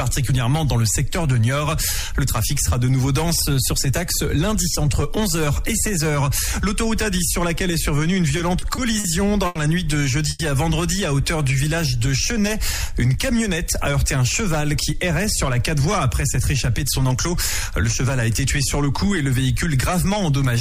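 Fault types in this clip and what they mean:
Repeated stalls (stutter): Packets kept showing up late, so the jitter buffer emptied four times between 8.37 and 9.06 s. Each time the last bit of sound got stretched, about 110 ms in all, longest gap 50 ms. Nothing's lost, but it drags and stutters there.
Short stall from a late packet: At 9.46 s one packet missed its slot and the buffer ran dry. The receiver held the last sound for 90 ms until it arrived, then carried on from the same spot. You hear a brief hang, and the delay grows by 90 ms.
Call audio freeze: At 10.29 s the sound hangs for about 110 ms, continued as a short fading buzz or hiss rather than dropping to silence, then picks up where it stopped. The likely cause is packets held up in transit, leaving the jitter buffer empty.
Jitter buffer slow-down: From 11.23 to 12.95 s the receiver was rebuilding its reserve by repeating tiny pitch-period slices over and over. 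That adds 78 ms and runs the audio at 96% speed, same pitch, so things sound slightly drawn out.
Jitter buffer speed-up: Between 15.53 and 19.07 s the buffer had more queued than it wanted, so it kept snipping out short pitch-period pieces, around 150 ms altogether. Playback runs at 104% speed with unchanged pitch.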